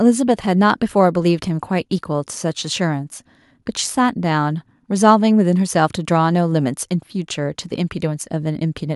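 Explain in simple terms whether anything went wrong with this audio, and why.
Nothing went wrong here: the speech comes through without any dropout, glitch, distortion or other audible fault.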